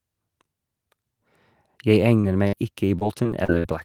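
A speech recording with three kinds of network damage late on. At 2.21 to 2.25 s a short concealed packet loss leaves a brief smear lasting about 20 ms, patched from the preceding sound. At 2.47 to 2.55 s a burst of packet loss holds the last sound for about 54 ms and lets it decay, then resumes further on with about 60 ms of audio missing, unlike the single smear. From 2.99 to 3.66 s repeated packet loss gives a choppy, robotic stretch: four gaps, the longest 58 ms, covering about a fifth of that span, so the patches recur rather than occurring once.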